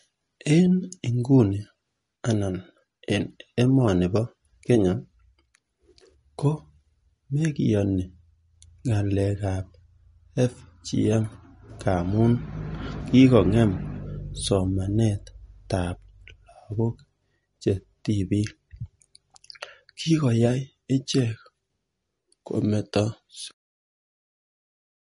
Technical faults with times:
0.00-25.07 MP3 compression
23.51-25.07 cut-off end

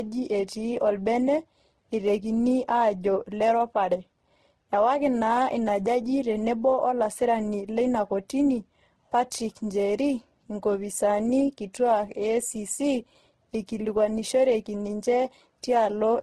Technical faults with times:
0.00-16.23 transcoding between lossy codecs

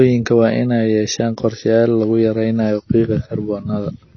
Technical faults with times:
0.00-4.16 AAC compression

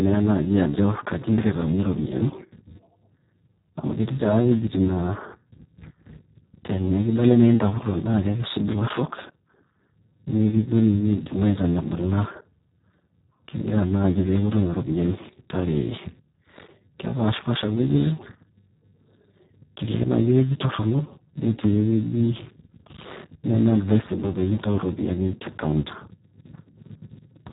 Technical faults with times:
0.00-27.52 Speex codec

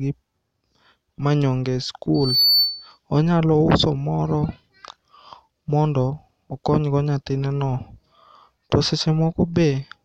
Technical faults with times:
2.14-2.98 loudspeaker feedback squeal

